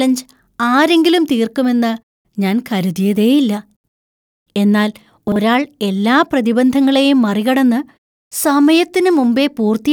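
Chunks out of order at 3.76–3.88 s, after "ഞാൻ കരുതിയേയില്ല", and 5.28–5.36 s, before "എല്ലാ പ്രതിബന്ധങ്ങളെയും മറികടന്ന്": a 40 ms chunk plays two, then one, chunks late, giving a jumbled moment.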